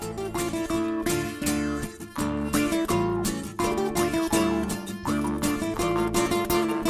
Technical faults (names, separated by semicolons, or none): none